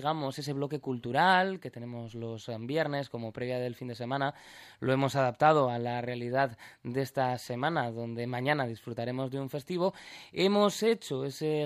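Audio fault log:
No audible faults anywhere in this clip.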